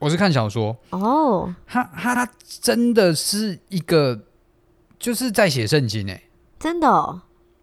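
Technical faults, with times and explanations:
2.16–2.26 s, 4.76–4.86 s and 7.36–7.46 s, overlapping chunks: the speech is stitched from 2.5 s pieces that each begin before the previous one ends, so about 100 ms plays twice at every join. That's the little stutter you hear at each seam.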